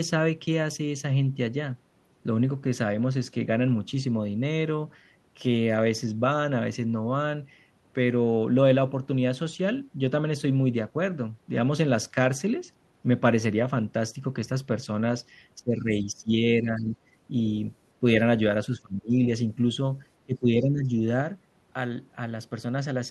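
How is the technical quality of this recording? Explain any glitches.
The speech has one recurring fault. Speech is suppressed in double talk in the later part of the clip, from 15.59 to 16.41 s, 16.62 to 16.97 s, 18.00 to 18.04 s, 18.67 to 19.14 s and 20.26 to 20.92 s. The likely cause is an echo canceller that could not tell the near talker from loudspeaker echo while both sides spoke, so it pulled the level down. The speech sags or breaks up in chunks, dipping anywhere from slightly to roughly 25 dB.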